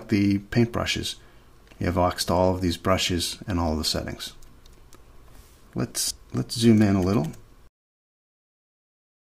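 At 2.21 s and again at 6.11 s, audio missing between chunks leaves a sudden skip of roughly a tenth of a second. The likely cause is a recorder losing material at each 4 s chunk handover. The waveform shows a hard seam, and the spectrogram a vertical break.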